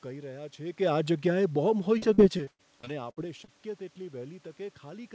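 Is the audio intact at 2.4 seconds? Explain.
No. Repeated packet loss runs from 1.98 to 3.50 s. Lost packets are patched by stretching the previous sound, leaving choppy, robotic audio with gaps up to 81 ms.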